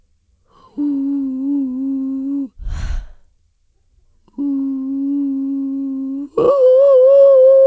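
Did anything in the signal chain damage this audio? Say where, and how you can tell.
No, nothing damaged this music.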